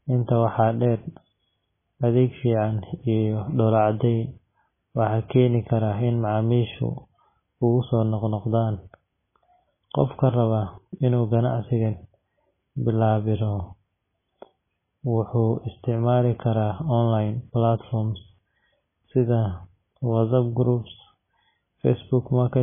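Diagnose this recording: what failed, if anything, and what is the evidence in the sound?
The speech is dull throughout, with nothing above 3.5 kHz. Swirling artefacts run through it, and s sounds chirp and smear. MP3 compression at the codec stage is the likely cause. Short of bits, the encoder cut the treble and dropped weak frequency lines, which flicker. The damage fits a bitrate near 16 kbps.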